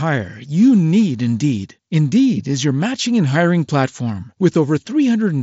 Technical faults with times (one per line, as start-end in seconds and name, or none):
none